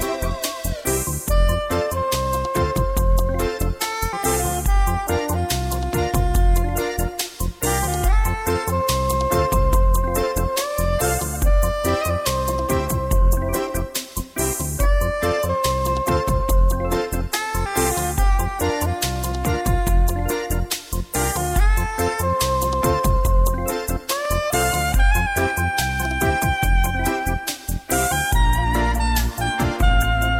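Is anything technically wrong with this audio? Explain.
No, there's nothing technically wrong here that I can hear; the audio just carries on steadily the whole way without anything catching the ear.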